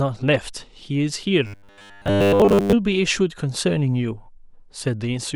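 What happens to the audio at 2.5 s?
At 2.5 s the speech has turned into a rigid, metallic buzz pitched at 100 Hz that still loosely tracks the words. This robotic sound from repeated short buffers runs from 1.47 to 2.73 s. It is likely caused by audio arriving too seldom, with roughly 10 ms chunks replayed over and over in place of most of the real signal.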